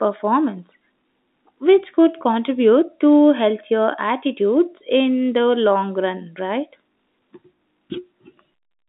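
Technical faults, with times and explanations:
The speech carries the narrow 200 Hz to 3.7 kHz band of a G.711 A-law telephone line at 64 kbps, and nothing in the signal departs from what that line normally delivers.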